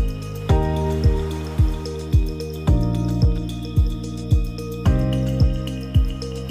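No technical faults can be heard anywhere in the audio, and the signal stays steady and intact throughout.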